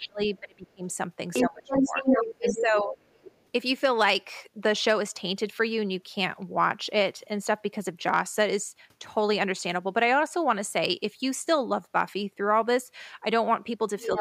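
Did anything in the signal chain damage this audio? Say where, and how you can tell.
Yes. The call processing likely mishandled double talk: its echo canceller couldn't tell the near talker from loudspeaker echo and attenuated both. Speech suppressed in double talk shows as dips of roughly 30 dB at 0.0–0.86 s, 20 dB at 1.44–2.06 s, 15 dB at 2.4–2.97 s, and a slight dip from 14.06 s to the end.

The same processing likely left residual echo, so the other side's voice leaks through. It comes at 1.33–1.45 s and 1.68–2.62 s at roughly the talker's own level, faintly at 3.13–3.35 s, and again just below the talker from 14.0 s to the end.

A gain stage overloaded, flattening waveform peaks, so hard clipping adds harsh high harmonics. It is overdriven by about 2 dB at 4.69–4.91 s, 8.09–8.42 s and 11.96–12.02 s, and by about 1 dB at 6.64–6.99 s. Each passage crackles on its loudest syllables.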